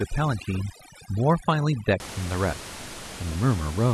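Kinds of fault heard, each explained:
Overdone noise removal: from 0.0 to 2.0 s, an overly aggressive noise reducer cuts individual frequency bands whenever they near its noise estimate, turning room noise about 13 dB below the speech into a lower background that breaks up into twinkling specks.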